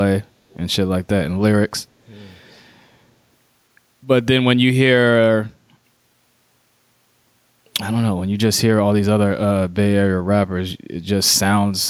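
A speech clip with a brief echo leak from 0.50 to 0.57 s: a faint delayed copy of the voice arrives about 270 ms behind it, far below the speech, likely from a loudspeaker's pickup slipping past an echo canceller. Unlike room reverberation, it is a distinct late repeat, not a smooth tail.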